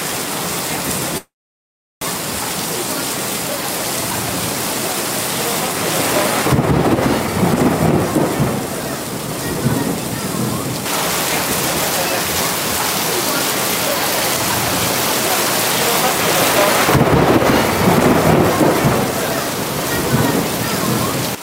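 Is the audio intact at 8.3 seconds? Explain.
No. At 8.3 seconds the audio is inside a jitter buffer speed-up that runs from 8.13 to 10.81 s. The receiver's buffer had built up more audio than its target, so it shortened the backlog by repeatedly cutting out short segments one or a few pitch periods long, around 70 ms in total. Playback runs at about 103% speed with the pitch unchanged over that stretch.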